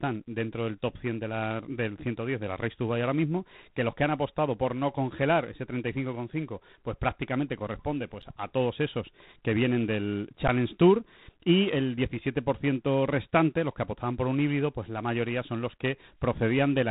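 Throughout, the speech passes through G.726 ADPCM at 24 kbit/s, which codes each sample as a coarse difference from an adaptive prediction. The damage is plainly audible as a rasping hiss that rises and falls with the speech level. On a spectrogram, everything stops at a hard ceiling near 3.9 kHz, and grainy noise fills the bands under the voice.

At 8.22 s and again at 10.48 s there is an underrun with held sample. The output buffer ran dry for about 10 ms, and the converter held its last value. The waveform shows a short flat line, likely away from zero, and playback then resumes where it stopped, with almost nothing lost. Each gap is a brief dropout without a sharp click.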